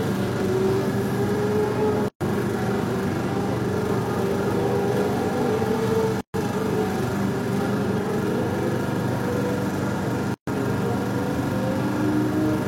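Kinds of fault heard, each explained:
Gap at a join of encoded pieces: silences open at 2.08–2.21 s, 6.21–6.34 s and 10.34–10.47 s, recurring every 4.0 s and lasting 125 to 133 ms each. The audio was encoded in separate pieces and joined untrimmed, so each piece's leading encoder delay and padded final frame remain. The continuous sound drops out with smeared edges, then resumes exactly where it stopped.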